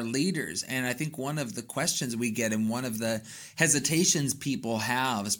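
No technical faults are audible anywhere in the speech.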